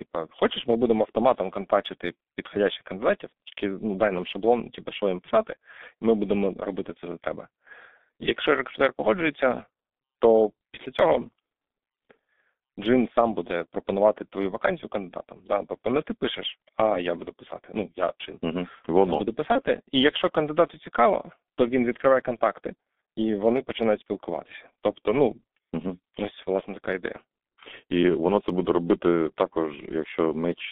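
Speech runs through the G.723.1 codec for the whole clip. The band sits between roughly 200 Hz and 3.6 kHz, and the heavy damage, a hoarse, muffled tone with smeared consonants, points to its 6.3 kbit/s mode. The damage is steady and grainy rather than warbly, unlike the swirling artefacts of a transform codec. At 19.52 to 19.62 s comes VoIP packet loss concealed by the speech codec. A brief fading sound, buzzy or noise-like, replaces the speech, which fits a single lost 30 ms frame, and the degradation lingers past the gap. That lingering and the smooth extrapolation set it apart from a hard dropout or click.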